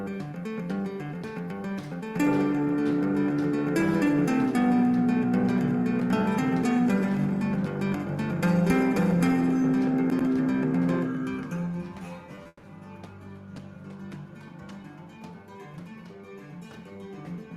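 Two short concealed packet losses and a long network dropout all fall in a cluster just after 12.3 s in this 18-second audio. The first packet loss runs from 12.35 to 12.39 s and the second from 12.43 to 12.47 s. In each, about 20 ms of audio failed to arrive, and the receiver covered the gap by extending the preceding sound before blending back. Each is heard as a brief smear or wobble. On a spectrogram, each shows as a thin strip where harmonics stretch flat or turn into blurred noise. In the waveform, each appears as a short, overly regular stretch. Immediately after, from 12.47 to 12.65 s, the audio turns into a fading buzz or hiss continuation of about 160 ms that ends in roughly 30 ms of near silence. This was likely a long network dropout, in which a run of data never arrived and the concealment ran out before the real signal resumed further on. On a spectrogram, it looks like a smeared band decaying to an empty gap. 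The waveform tapers to a flat line before the sound returns.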